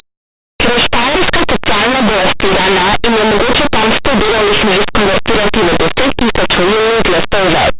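Speech runs through the whole recording buried in very loud, harsh distortion, the mark of linear audio read as companded. Plain 8-bit linear samples are being expanded as though they were mu-law codes, so tiny values just to one side of zero jump to the loudest outputs while their mirror values stay small. Plain 8-bit rounding would instead leave a faint grainy hiss about 50 dB down with clean loud passages.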